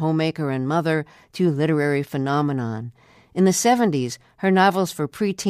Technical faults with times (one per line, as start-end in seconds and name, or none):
none